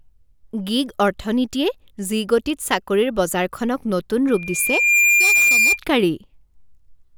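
A microphone in this speech recording was picking up the loudspeaker it fed, and at one frequency the loop gain passed unity, producing loudspeaker feedback squeal. Just after "চাকৰিৰ বজাৰখনক নতুন", from 4.27 to 5.80 s, a pure tone at 2.4 kHz swells out of the speech over most of a second. It settles at about 5 dB above the talker, a piercing whistle.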